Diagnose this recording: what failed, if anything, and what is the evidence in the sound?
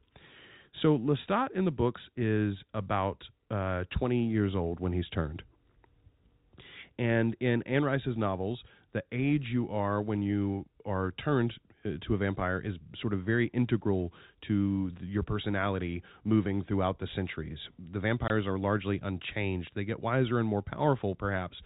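A brief dropout with hard edges opens at 18.28 s and lasts 20 ms, right before "are largely unchanged". This is packet loss filled with silence at the network stage. The hole fits a single lost 20 ms packet, which the receiver replaced with silence in the narrowband G.711 telephone stream.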